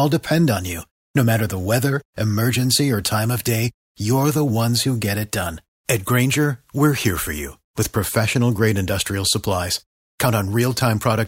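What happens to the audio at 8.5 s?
Nothing goes wrong at 8.5 s; the speech there plays through intact, with no dropout, click, distortion or other audible fault at that moment.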